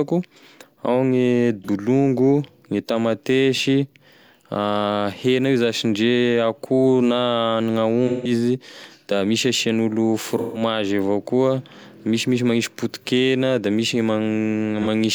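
At 1.64, 8.07, 10.31 and 14.82 s there's AAC frame loss with concealment. The decoder patches the gaps from the last good spectrum. The roughly 43 ms dropouts, about one frame, smear briefly. The roughly 171 ms ones at 8.07 and 10.31 s, about four frames, stay noisy and phasey longer.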